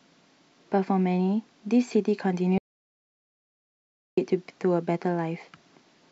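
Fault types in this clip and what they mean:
Audio dropout to silence: the speech cuts off dead at 2.58 s and nothing comes through until 4.17 s, 1.6 s of silence with no room tone, likely because the input dropped while the recorder kept writing silence.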